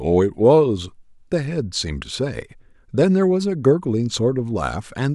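Nothing in the speech stood out as a technical fault on listening.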